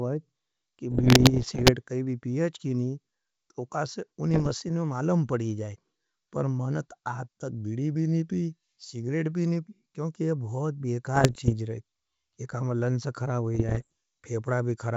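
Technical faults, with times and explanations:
0.91–1.73 s, 4.31–4.53 s, 11.16–11.54 s and 13.55–13.86 s: bit errors on an ADPCM link. Flipped bits knock the G.722 decoder's step size and predictor off track, so each burst rings on as pops, rough crackle and brief level jumps. The first and heaviest burst ends just before "काई भी पी अच्छी". The second follows "अच्छी नहीं तो कासे", and the last follows "काम लंस ख़रा हो".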